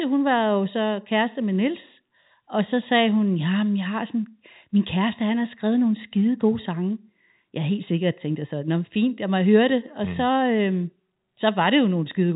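Nothing stood out on listening to this speech clip, which comes across as ordinary telephone-band audio from G.711 coding with nothing above about 3.8 kHz.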